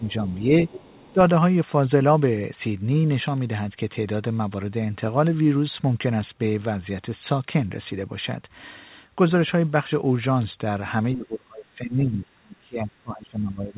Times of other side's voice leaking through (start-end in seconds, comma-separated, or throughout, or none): 0.39-0.43, 0.68-1.13